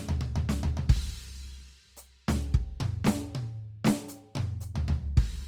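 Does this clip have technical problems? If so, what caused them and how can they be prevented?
Yes. Throughout the music, tones sound grainy, rough and noisy, likely from Opus compression in its CELT music mode at a rate that fits about 24 kbps. Unlike MP3 there is little swirling, because starved bands are filled with folded or noise content rather than left empty, and the audio still extends to about 20.2 kHz. Encoding at a higher bitrate, such as 64 kbps or more for music, would prevent it.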